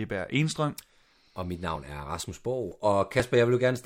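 Short skips occur at 0.32, 0.80, 1.28, 1.76, 2.24, 2.72 and 3.20 s, each dropping about 20 ms of speech with the sides butted together. The strict 0.48 s spacing, with no silent gap, points to audio likely missing between chunks rather than random dropouts.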